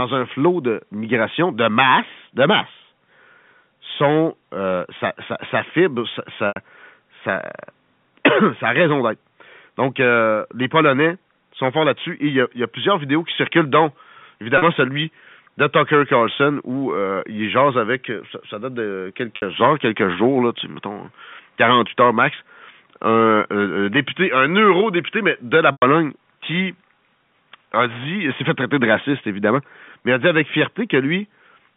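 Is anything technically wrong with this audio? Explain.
Yes. Packet loss with pitch repetition occurs at 6.48 s, 14.58 s, 19.36 s and 25.72 s, with gaps of 80, 40, 60 and 100 ms. At each gap the receiver fills in the missing audio by looping the last pitch period and fading it down. The 40 ms gap sounds like a brief, buzzy hold. The 80 and 100 ms gaps sag toward silence before the speech cross-fades back in. The gap lengths fit lost 20 ms packets. The speech sits in a telephone band of 200 Hz to 3.5 kHz, consistent with G.711 coding.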